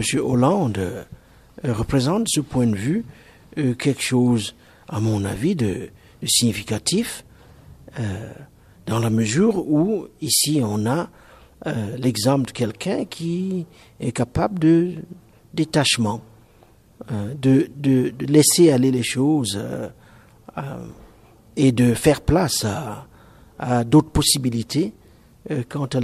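No technical faults are audible anywhere in the audio, and the signal stays intact throughout.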